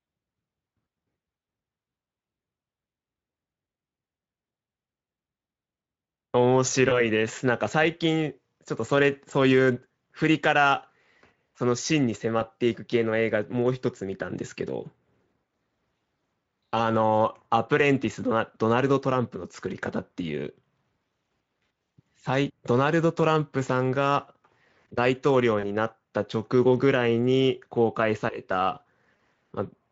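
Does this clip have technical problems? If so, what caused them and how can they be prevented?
Yes. VoIP packet loss concealed by the speech codec occurs at 6.89–7.06, 12.39–12.42, 25.59–25.66 and 29.17–29.19 s. The decoder fills short gaps, consistent with one lost 20 ms frame, or two at 25.6 s, by extending the last sound into a fading buzzy tone or coloured noise. Prevent it with a stable network, forward error correction and an adequate jitter buffer.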